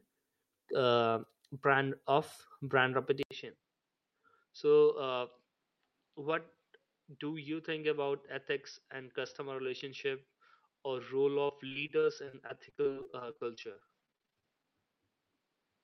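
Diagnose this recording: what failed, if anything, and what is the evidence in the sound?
At the input stage, the capture path most likely switched at 3.23 s from the original microphone to a poorer device, such as a headset in its call profile. After an 80 ms silence at the switch, the speech comes back about 5 dB quieter and band-limited, with nothing above 5.8 kHz, so it sounds dull and boxy through to the end. A faint new background noise, far below the speech, belongs to the replacement device.

In the network stage, repeated packet loss (robotic sound) runs from 11.47 s to 14.66 s. Packets kept going missing or arriving too late, and the receiver covered each hole by stretching the preceding sound. The holes are short, the longest 43 ms, but they come in close succession, so about 23% of that stretch is patched-over audio. The speech turns choppy, with fragments dropped out.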